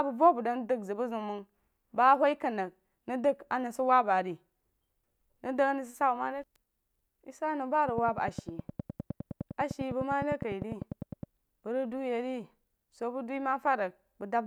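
Likely interference or a faulty connection injects a train of clicks into the speech from 7.89 to 11.24 s: regular ticks at 9.9 per second, about 10 dB above the signal.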